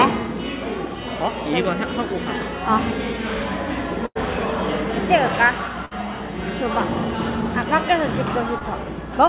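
A recording of everyday sounds, carried over a call link whose narrow band stops at 4 kHz, which fits G.711 mu-law at 64 kbps. Two bursts of packet loss occur, at 4.06 to 4.17 s and 5.85 to 5.93 s. The receiver stretches the last sound into a fading tail, then jumps ahead about 100 ms and 60 ms. A short concealed packet loss at 8.59 to 8.62 s leaves a brief smear, where about 16 ms was patched over and blended back.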